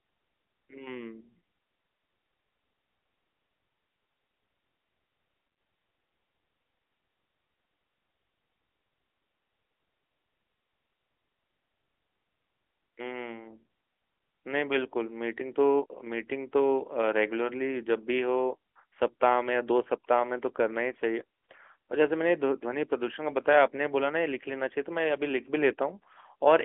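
No technical faults can be heard in this speech.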